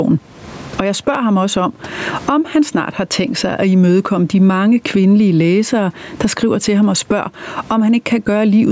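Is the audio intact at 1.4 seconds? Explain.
No. At 1.4 seconds the speech has gain pumping, which runs through the whole clip. The likely cause is input gain set far too high, with a fast limiter pulling the level down on each loud syllable. The level swings by around 20 dB. Loud and soft parts sit close together, so the speech sounds squashed.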